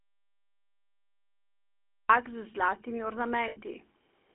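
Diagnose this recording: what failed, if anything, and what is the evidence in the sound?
The clip opens already in an audio dropout to silence. From 0 to 2.1 s it's dead silence with no room tone at all, so the input likely got disconnected or muted upstream of the recorder, which kept writing silence until the speech came back.

Throughout, the codec stage leaves that buzzy, gravelly GSM full-rate texture, and the band is squeezed to roughly 250 Hz to 3.4 kHz. The damage is plainly audible and fits a 13 kbps GSM encode, where pulse-driven excitation smears the fine detail.

At 3.48 to 3.59 s there are lost GSM frames on the network or radio link. The sound freezes into a brief metallic, ringing hold as the decoder repeats the last good frame. That points to about 80 ms of missing audio.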